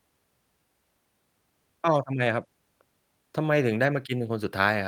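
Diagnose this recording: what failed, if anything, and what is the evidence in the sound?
Nothing failed, and nothing in the sound of this speech recording points to a fault at any stage.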